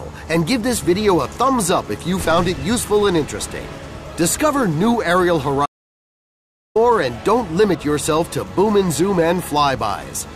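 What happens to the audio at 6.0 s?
At 6.0 s the audio is in the middle of an audio dropout to silence running from 5.66 to 6.76 s, about 1.1 s of silence. The input was likely lost while recording continued, so the sound cuts off abruptly, leaving no room tone, then resumes mid-flow. The waveform shows a flat line, and the spectrogram shows a fully blank band.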